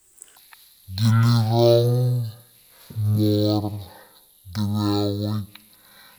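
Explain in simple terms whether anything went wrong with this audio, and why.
Something went wrong from about 0.36 s to the end at 6.19 s: the speech plays at half speed and a full octave lower. This is stereo read as mono. The left and right channels were fed one after the other into a single track, so every moment lasts twice as long. Unlike a simple slowdown, it also adds a faint ghost of the sound up high, produced by the two interleaved channels.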